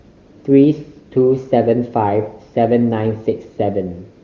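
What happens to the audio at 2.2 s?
Nothing goes wrong at 2.2 s: the speech passes through intact, carried by the AMR wideband (HD Voice) codec at its top rate with at most faint codec damage at that moment.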